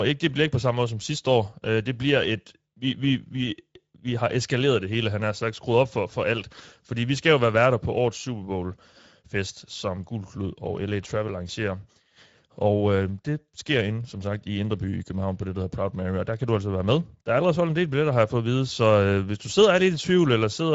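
From start to finish the speech carries Speex codec damage, and it's plainly audible: a hoarse, noisy grain on every phrase, which fits a middle-quality setting of about 17 kbps. Nothing survives above 7.7 kHz, and the top band sounds like shaped noise fill rather than real detail.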